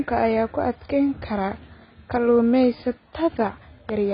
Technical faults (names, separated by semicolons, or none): AAC compression